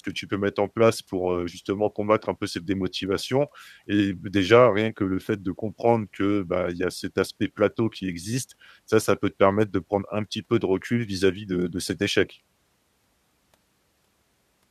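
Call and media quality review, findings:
No faults found on listening; nothing to report.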